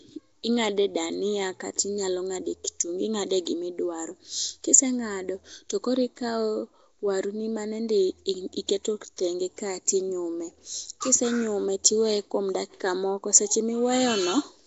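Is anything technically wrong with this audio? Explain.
Yes. Throughout the speech there is plainly audible codec damage. Nothing is present above about 7.7 kHz, and the voice carries a rough, hissy halo with a smeared, underwater character. This is likely Nellymoser compression, the old Flash microphone codec. It codes the signal in short fixed blocks with very few bits per sample. Quieter frequency bands get no bits and are filled with synthetic noise, which produces the hiss and smearing. The damage level fits a bitrate of around 32 kbps.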